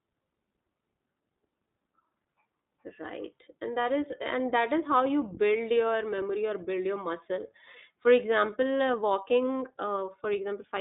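From start to end the speech sounds thin, slightly rough and synthetic, with plainly audible damage and nothing above 3.8 kHz. That is the iLBC codec: a narrowband line of 150 Hz to 3.7 kHz, each frame coded independently, which fits 20 ms frames at 15.2 kbps.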